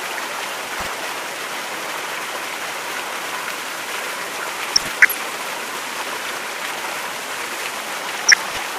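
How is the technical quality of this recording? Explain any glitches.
The recording is marred by three short bursts of DAB burbling, at 0.51 to 0.87 s, 4.76 to 5.26 s and 8.25 to 8.58 s. Each adds short blips of noise over the sound. Weak reception lets bit errors, a few tenths of a percent, slip past error correction into the MP2 data. Corrupted samples then put short blips of noise in single sub-bands, and corrupted scale factors make sub-bands jump in level for up to a frame.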